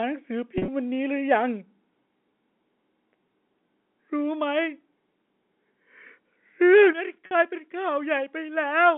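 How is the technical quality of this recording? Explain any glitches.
The recording has several glitches: two packet-loss gaps, two clipping episodes and two sudden level drops, all heard through a narrow telephone band of about 200 Hz to 3.5 kHz.

Packet loss with pitch repetition occurs at 0.58–0.68 s and 7.26–7.31 s. About 80 ms went missing in the first gap, scattered over 100 ms with the longest run near 40 ms. About 50 ms went missing in the second. The receiver bridged each gap by repeating the last pitch period, which gives a brief held, buzzy tone. On a spectrogram this shows as flat, frozen harmonics. The waveform shows identical repeating cycles.

Microphone overload appears at 6.73–6.84 s, about 3 dB over the limit with several percent of samples clipped, and again at 8.85–8.87 s, about 1 dB over. It is likely caused by the input volume being set too high, so peaks hit the converter ceiling. 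The loudest syllables sound harsh and crackly. The waveform shows flat-topped peaks, and the spectrogram shows added high-frequency smear.

Microphone volume stepped down occurs at 2.04 s, by about 1 dB, and at 6.93 s, by about 8 dB. The second step follows the overload. The likely cause is the call software cutting the input gain in one step. Voice and background drop together, most noticeably at 6.93 s. The waveform envelope shrinks abruptly, and the spectrogram darkens evenly across the band.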